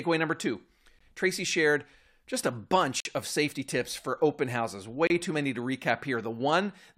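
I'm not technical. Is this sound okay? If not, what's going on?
No. The speech briefly drops to dead silence three times: at 0.99 s after "number two", at 3.00 to 3.05 s after "shared just a", and at 5.07 to 5.10 s after "tips for open houses". These are gaps between stream segments: every two seconds, the pieces don't line up, and silence fills the hole.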